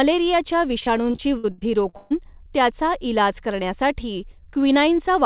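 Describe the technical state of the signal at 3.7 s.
At 3.7 s the speech is intact, with no dropout, glitch or distortion, only the narrow telephone-band sound of the call path, which carries nothing above 4 kHz.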